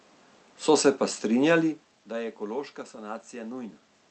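No technical faults can be heard in this recording. A steady background noise from the room sits under the speech, and the talker's level shifts at the microphone around 1.5 s and again near 4 s, as when someone leans back or comes closer.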